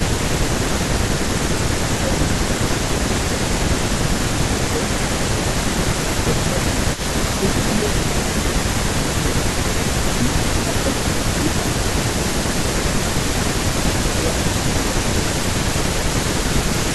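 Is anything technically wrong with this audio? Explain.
Yes. This speech clip has two faults.

Speech suppressed in double talk occurs at 0.0 to 0.1, 0.73 to 2.92, 3.48 to 5.12, 5.84 to 10.33, 10.64 to 12.22 and 12.86 to 15.38 seconds. The voice dips by about 10 to 15 dB, in pieces. The likely cause is an echo canceller mistaking overlapping talk for echo and turning it down.

An echo leak runs from 0.0 to 0.7 seconds and from 1.01 seconds to the end. A second copy of the voice trails it by 398 ms, at about 15 dB below the speech at first, then about 10 dB below. This is likely loudspeaker sound that the echo canceller failed to remove.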